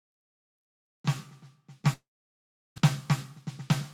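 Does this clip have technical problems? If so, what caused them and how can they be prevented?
Yes, two problems.

From 1.93 to 2.80 s the music breaks off in a long network dropout. The last sound is stretched into a fading buzz, then about 0.73 s of silence follows, and the music resumes roughly 0.64 s further along, with that passage gone. The likely cause is a network stall that shifted the stream's timing by a couple of tenths of a second. Unlike a brief packet loss, the concealment gives up and the skipped material never returns. A steadier connection, or forward error correction with redundancy, would prevent it.

From 3.38 to 3.73 s a jitter buffer speed-up makes the music run at about 118% speed. The receiver had built up extra queued audio and cut short pitch-period slices, removing around 70 ms in total, so the tempo rushes while the pitch stays the same. That unchanged pitch sets it apart from a plain playback-rate error. 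Smoother packet delivery, or a buffer that trims its excess more gradually, would prevent it.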